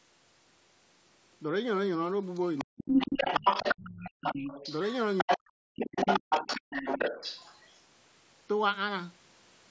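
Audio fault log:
2.34–4.95 s, 5.18–5.37 s, 5.8–7.79 s: other side's voice leaking through. A second voice sits roughly level with the talker, briefly louder near 5.2 s, likely from a loudspeaker the echo canceller missed. An added voice, not a lost one.
2.64–3.44 s, 5.24–6.31 s: speech suppressed in double talk. The talker's own voice drops almost to silence in pieces, about half a second then about 0.7 s in total, likely from the canceller ducking both voices during overlap. Speech is removed here, not added.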